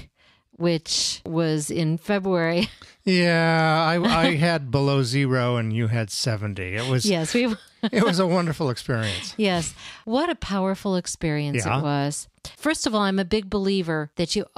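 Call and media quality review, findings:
No audible faults found in the speech recording.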